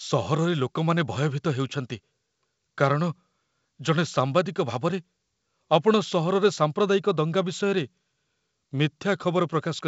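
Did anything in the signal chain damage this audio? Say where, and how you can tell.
No, nothing in the chain has hurt this speech; it came over a call link using the G.722 codec, which is why nothing sits above 8 kHz, and that's simply how that path sounds when it's doing its job.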